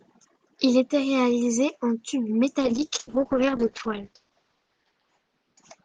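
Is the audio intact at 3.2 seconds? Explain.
No. A call bitrate drop runs from 2.61 s, just after "était réalisé en tubes", to the end. The encoder falls from 64 to 8 kbps and narrows the band from 20 kHz to 8 kHz, so the speech turns coarse, watery and muffled.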